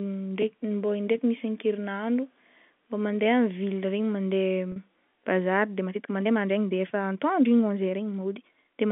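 Telephone-band speech, carried by G.711 coding that limits it to about 150 Hz to 3.5 kHz, has two faults. At 4.72 to 4.76 s a brief, slightly held, buzzy moment appears. This is packet loss with pitch repetition: about 40 ms of audio, consistent with two lost packets, was bridged by repeating the last pitch period. From 5.81 s to the end, the pace suddenly becomes rushed at about 1.35 times normal speed while the pitch stays unchanged, which is likely a time-stretched section squeezed by software that dropped short pieces.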